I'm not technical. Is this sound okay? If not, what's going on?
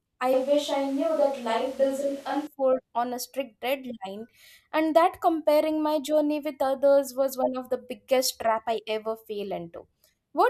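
No. From about 0.34 to 2.47 seconds, the speech suddenly goes roomy and hollow, loses some of its warmth and low end, and picks up more background noise, then snaps back just as abruptly. That's a switch to a distant microphone: the close mic most likely dropped out, so a mic further away, like a camera's, took over. Oddly, the volume barely changes, so the giveaway is the sound itself.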